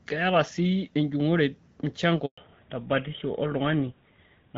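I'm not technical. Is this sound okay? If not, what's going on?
No. At 2.26 seconds the phone moved the call from one network to another, and nothing got through while it switched. That is a handover gap. The voice drops out abruptly and there is about 120 milliseconds of silence, until 2.38 seconds, when the new connection picks up. Whatever was said in that brief moment is simply missing, so a tiny piece of the speech is cut out and cannot be recovered.

Right after the switch, from 2.38 seconds to the end, the call fell back from HD Voice to an older, lower-quality phone codec. That is a fallback to narrowband. Before this point the voice came through the HD Voice codec clearly, with only light coding damage. After it, everything above 4 kHz is gone, so the voice loses its crispness and sounds duller and rougher, more like an old-fashioned phone line.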